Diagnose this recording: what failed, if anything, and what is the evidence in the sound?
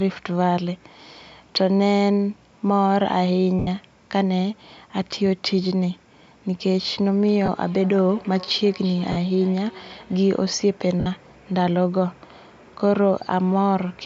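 Lost LE Audio frames, at the Bluetooth link and codec stage: dropouts at 3.59–3.68, 7.46–7.49, 9.12–9.17 and 11.00–11.07 s become a noisy smear as the LC3 decoder repeats the last spectrum.

Feedback echo between two devices, in call processing: from 7.29 to 10.62 s, speech returns about every 0.3 s, peaking about 20 dB below speech and growing thinner and more ringing with each pass.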